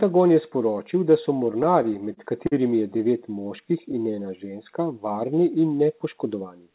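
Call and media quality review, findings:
Repeated stalls (stutter), 1.52–2.54 s. Packets arriving late, jitter buffer repeatedly underrunning; receiver extends last sound across 8 gaps, 136 ms filled in total, longest 46 ms. Nothing lost, but the speech drags and stutters.

Short stall from a late packet, 2.98–3.01 s. One packet missing its playout deadline, buffer empties, 18 ms of concealment bridges until arrival, playout resumes at same point. Heard as one briefly held sound, slight buzz or dip.

Jitter buffer slow-down, 3.48–4.24 s. Buffer rebuilding its reserve by repeating single pitch periods and pause fragments, 77 ms added overall. Speech runs at about 91% speed, pitch unchanged, sounds drawn out.

Jitter buffer speed-up, 6.25–6.73 s. Excess buffered audio being drained by cutting pitch-period-sized pieces, around 70 ms removed. Speech plays at about 112% speed at the same pitch, sounding hurried.

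Band limited to 4 kHz throughout, which points to narrowband G.711 A-law at 64 kbps on the call path.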